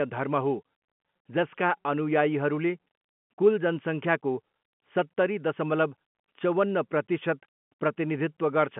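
No technical faults are audible.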